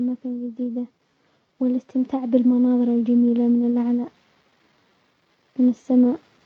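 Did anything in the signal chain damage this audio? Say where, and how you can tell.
Yes. Automatic gain rising from 1.58 s to 4.07 s, a change in the call processing stage. Over those two and a half seconds, the speech and the background noise beneath it swell together by about 6 dB. That shared rise shows the boost comes from a gain control acting on the whole signal, not from the talker speaking louder. Judging the input too quiet, the automatic gain control stepped its gain up gradually across this span.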